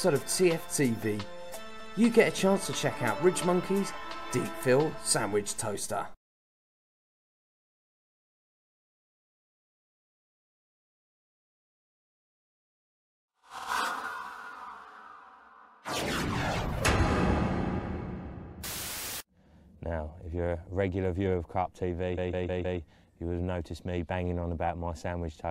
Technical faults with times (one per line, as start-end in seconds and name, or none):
13.57-13.68 repeated frames
22.17-22.79 repeated frames